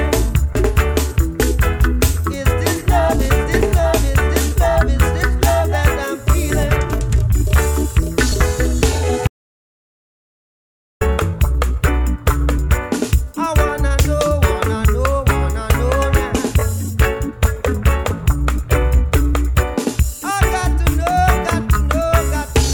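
At 9.28 s the sound drops out to silence, with no room tone at all, until it picks up again at 11.01 s, mid-flow. That's an audio dropout to silence lasting about 1.73 s, likely from the input cutting out while the recorder kept writing silence.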